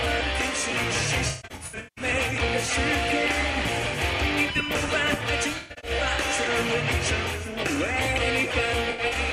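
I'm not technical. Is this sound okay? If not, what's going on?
No. There's AAC frame loss with concealment at 1.28–2.05 s, 5.57–5.91 s and 8.90–9.14 s: chunks went missing, and the player patched them, so it sounds smeary and garbled.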